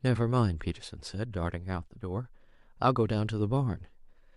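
No technical faults can be heard anywhere in the recording.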